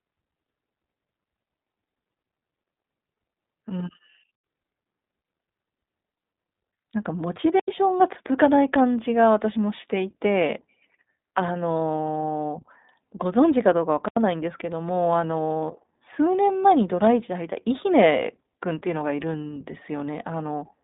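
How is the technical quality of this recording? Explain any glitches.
The technical quality is poor: the speech runs through a narrowband codec the whole way, and it drops out three times.

Throughout, the audio has passed through the iLBC codec, which codes each 20 ms frame on its own at a rate that fits 15.2 kbps. The band is confined to about 200 Hz to 3.7 kHz with nothing above 3.8 kHz, so the speech sounds muffled, rough and plainly synthetic.

At 4.35 s, 7.60 s and 14.08 s, a block of digital silence appears. Each time, zeros were played for 85 ms, which fits a 4096-sample buffer, likely because the output buffer went unfilled. The speech cuts abruptly to silence and back, leaving a short hole.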